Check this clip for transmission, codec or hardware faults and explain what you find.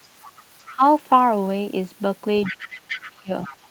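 Three kinds of fault are present in this speech clip: a second voice leaking in, the main talker dipping during overlap, and one roughened moment.

Other side's voice leaking through: a faint second voice appears at 0.24–0.42 s, 0.62–0.72 s, 2.43–3.10 s and 3.43–3.56 s, strongest near 2.4–3.1 s. It is likely loudspeaker echo the canceller left behind.

Speech suppressed in double talk: the talker dips by about 10 dB at 0.72–0.83 s, then drops by about 25 dB across 2.52–3.32 s, while the other voice overlaps. This is likely the echo canceller turning everything down.

Lost packet rebuilt from error correction: a brief rough, noisy patch at 0.97 s lasts 20 ms with no gap. That fits a single lost packet replaced by its low-bitrate in-band copy.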